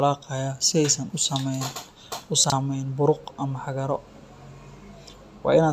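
A speech recording with one case of chunks out of order between 2.44 and 2.52 s. A 20 ms chunk plays three chunks too late, after the audio that should follow it, so that 80 ms stretch sounds briefly jumbled, with three hard joins. Unlike a dropout or a stutter, nothing goes missing and nothing is repeated. The sound is all there but in the wrong order, which points to a buffering or write-ordering error.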